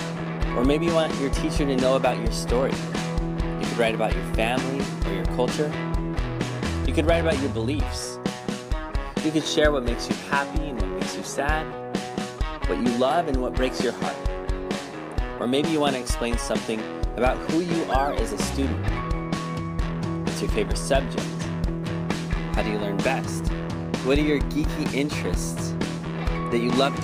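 No technical faults can be heard in this audio. Nothing at any point stands out as a problem to place on a timeline.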